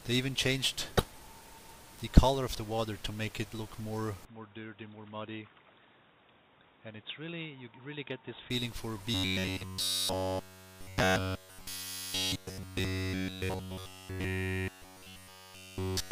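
A loud, brief burst of garbled noise at 0.97 to 1.06 s, and a fainter one at 11.75 to 11.86 s, come from a corrupt frame decoded: damaged compressed data spread over a few frames was played anyway, putting energy at wrong frequencies. From 4.25 to 8.50 s the audio abruptly turns dull and boxy, with the level dropping by around 10 dB, with no gap at the change, likely because the input switched to a poorer device. From 9.14 s to the end the sound becomes a rigid, metallic buzz fixed at 93.8 Hz, likely robotic sound from repeated short buffers, with a repeat period of about 10.7 ms.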